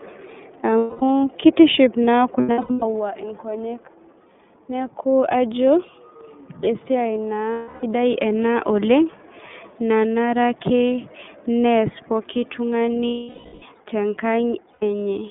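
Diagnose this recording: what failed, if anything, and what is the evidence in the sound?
Throughout, the speech sounds thin, rough and faintly synthetic, with nothing above 3.5 kHz. This is the iLBC codec stage: narrowband VoIP coding at 13.33 kbps in 30 ms frames.

Held, buzzy vowel-like fills replace the sound at 0.78–1.02 s just before "kitiship naa", 2.39–2.83 s after it (scattered short dropouts), 7.53–7.84 s after "esiai naa", 13.07–13.63 s and 14.73–14.83 s. These are lost iLBC frames from the network stage. The decoder repeated the last pitch cycle mixed with noise, then recovered almost at once because each frame stands alone.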